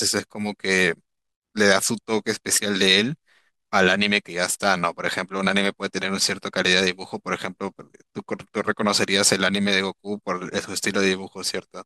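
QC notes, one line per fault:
No faults found in this clip.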